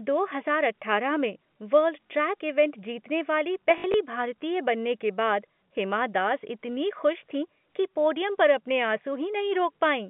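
Speech carried over a narrow 150 Hz to 3.4 kHz telephone band, and between 3.78 and 3.94 s it suffers packet loss with the last packet repeated. About 80 ms goes missing across 160 ms, and the longest run is 60 ms, which points to 20 ms packets. The repeated segments buzz near 50 Hz. On a waveform this shows as identical repeating blocks, and on a spectrogram as evenly spaced vertical stripes.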